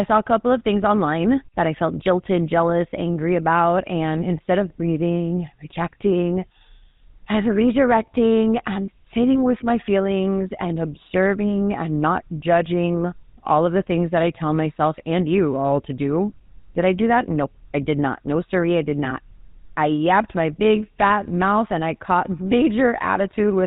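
From start to finish the speech carries a buzzy, gravelly roughness, and nothing above 4 kHz comes through. This is the GSM full-rate codec, which fits a 13 kbps stream: it models the vocal tract, then drives it with sparse, evenly spaced pulses instead of the true excitation.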